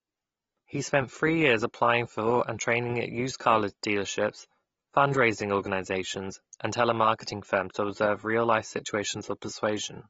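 From start to finish, the speech has nothing above about 7.6 kHz, and the damage is plainly audible: sibilants turn fizzy and smeared, and sustained vowels warble. This is likely AAC compression, with an encoder starving the upper spectrum at a low bitrate, roughly 30 kbps, and quantising the remaining bands coarsely enough to leave gaps. A simple low-pass filter would dull the top end just as much, but it would leave no swirling, watery texture in the midrange.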